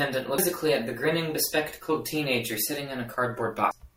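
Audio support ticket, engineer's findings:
Short blip right near the tail of the speech, at 3.71 s. Damaged data in a compressed stream, so the fault sits at the codec/decode stage, not capture or playback. A bad patch of bytes in that frame means the decoder can't read it, drops sync, and scans ahead for the next valid frame header. What's left is that brief blip. Worth checking the file or transport for corruption around that point.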